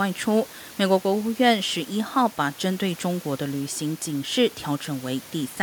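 Nothing stood out on listening to this speech, apart from a faint background of room noise sitting about 24 dB beneath it.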